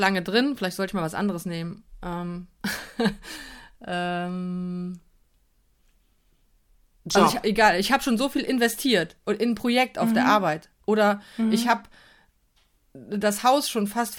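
A speech recording, and nothing in it is technically wrong.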